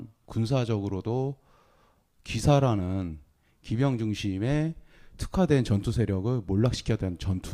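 No technical faults can be heard anywhere in the recording, with the signal holding steady and continuous across the whole speech clip.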